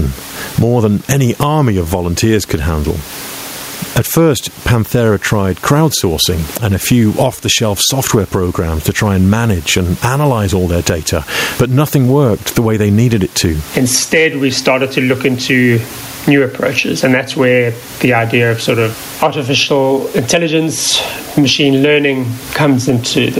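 Across the whole clip, an input gain set far too high for the microphone, with a fast limiter likely reining it in, produces gain pumping: a swing of around 20 dB that leaves the speech flattened and squashed, with the room noise about 32 dB below the speech. At 14.14 to 14.27 s and again at 19.23 to 19.27 s, peaks exceed what a stage can pass by about 2 dB and are sliced flat. This hard clipping adds high harmonics, heard as brief crackle on those loud moments.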